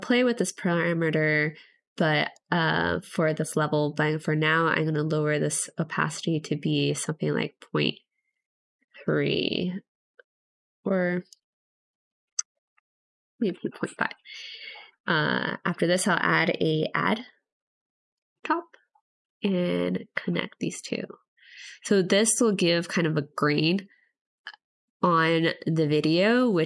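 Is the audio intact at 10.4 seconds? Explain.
Yes, at 10.4 seconds the audio plays through intact, with no dropout, click, distortion or other fault at that moment.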